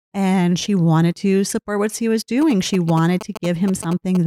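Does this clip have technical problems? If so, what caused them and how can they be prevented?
Yes. From 2.42 s to 4.17 s, just after "support what he was", GSM signalling bursts cut through the speech as a galloping dit-dit-dit of short buzzes pulsing at about 217 Hz, roughly 10 dB below the speech. A nearby 2G phone was exchanging short radio bursts with the network, and the audio circuitry rectified that RF into audible clicks. Keep mobile phones well away from microphones, cables and interfaces, or switch them to airplane mode while recording.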